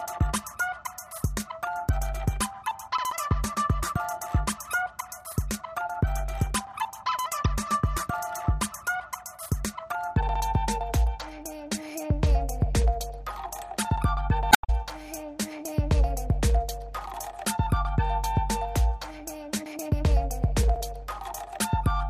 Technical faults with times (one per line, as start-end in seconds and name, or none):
14.49-14.70 damaged data in a compressed stream